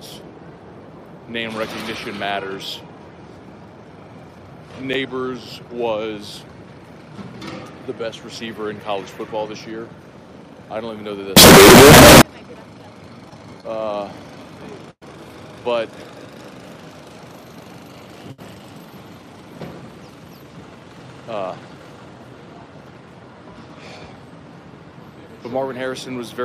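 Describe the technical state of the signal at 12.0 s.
At 12.0 s the signal is a wall of very loud, harsh distortion, and the quiet parts are blasted up to the same level as the rest. It lasts from 11.37 s to 12.22 s. The likely cause is signed and unsigned samples mixed up in 16-bit audio. That flips the top bit, so every point where the waveform crosses zero jumps from one extreme of the range to the other.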